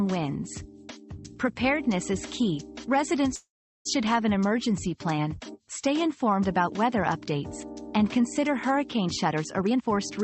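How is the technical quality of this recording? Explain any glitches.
The recording has two timing glitches. It came through a call path whose high end stops at about 8 kHz, which fits a wideband call codec.

From 3.35 to 3.87 s there is a call audio freeze. The sound stops and a fading buzz fills the gap, then about 0.37 s of silence. Packets were likely held up, so the jitter buffer ran dry. When they arrived, playback resumed where it stopped. Nothing is lost. The rest of the clip just plays about half a second later.

From 9.05 to 10.18 s there is a jitter buffer speed-up. The sound runs at about 122% speed with the pitch unchanged, so it feels hurried. The buffer held more audio than its target. To catch up, the receiver cut many short pitch-period slices in a row, removing roughly a third of a second in total.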